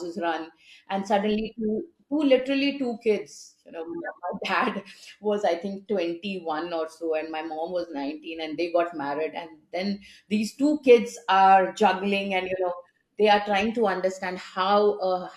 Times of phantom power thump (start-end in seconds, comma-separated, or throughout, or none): none